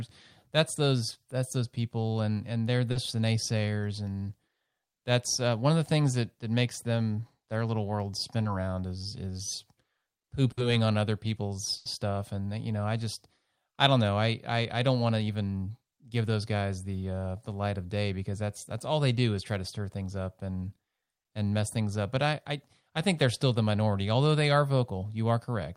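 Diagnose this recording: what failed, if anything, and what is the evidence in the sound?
Short concealed packet loss, a network fault: at 2.91 s, between "people and and they're" and "the naysayers and", about 40 ms is smeared over, and at 8.43 s, after "them their little world", about 20 ms. The receiver stretched the preceding sound and blended back, leaving a brief wobble rather than an audible gap.

A burst of packet loss, also on the network path: at 10.51 to 10.59 s, just before "on other", about 60 ms is lost, and at 11.77 to 11.87 s about 80 ms. These gaps are long enough that the concealment fades into a held buzz or hiss, and speech resumes with a piece missing, unlike the brief smears earlier.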